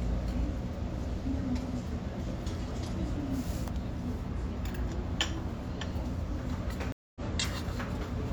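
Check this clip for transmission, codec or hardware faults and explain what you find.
One fault: a stream reconnect at 6.92 to 7.20 s. The connection broke, leaving 0.23 s of silence, and a fresh decoder resumed the stream roughly a third of a second later. Unlike a plain dropout, which resumes where it stopped, the sound skips ahead.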